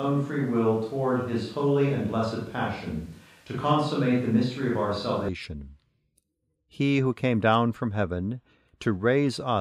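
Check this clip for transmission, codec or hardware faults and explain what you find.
One fault is present: a switch to a distant microphone, already under way when the clip begins and lasting until 5.29 s. Over that stretch the speech sounds roomy and hollow, with thin low end and a noise floor sitting about 35 dB below the speech, while overall level stays roughly the same. At 5.29 s the sound turns abruptly closer and fuller. The likely cause is that the close microphone's feed was missing and a farther-off pickup carried the recording until the close microphone returned.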